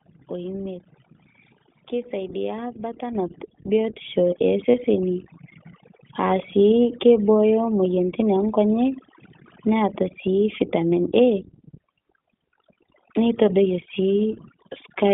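A speech recording carries four kinds of fault. Overdone noise removal, with a suppressor set far too strong, pulls bands near its noise estimate down or out, leaving a lowered background that breaks up into twinkling specks. The iLBC codec, in what sounds like its 15.2 kbps mode with 20 ms frames, confines everything to roughly 150 Hz to 3.6 kHz, plainly audible as a dull, slightly rough, synthetic voice. The microphone volume stepped up twice as the call software raised the input gain: at 3.15 s, right after "keisaidia butter", voice and background jump together by about 8 dB, then by about 4 dB more at 4.17 s. Lost iLBC frames from 4.72 to 4.75 s, consistent with one missing 20 ms frame, make the decoder repeat the last pitch cycle with noise, a brief buzzy held vowel before the voice returns cleanly.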